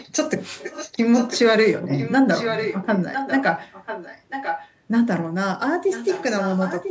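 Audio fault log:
0.00–0.09, 0.39–0.92, 1.13–1.39, 1.97–2.15, 2.33–4.70 and 5.90–6.90 s, echo leak: a quieter copy of the speech returns 995 ms late, loudest around 2.33–4.70 s. This is likely loudspeaker sound that the far end's echo canceller failed to remove. On a spectrogram, it shows as weaker repeats of earlier speech patterns shifted right by about a second.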